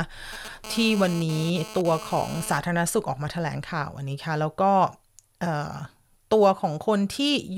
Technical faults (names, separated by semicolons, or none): GSM phone buzz